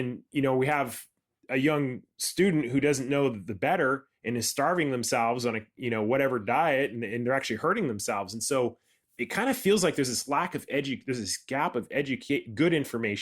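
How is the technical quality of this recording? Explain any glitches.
Nothing in the recording stood out as a technical problem on listening, so there are no glitches to explain.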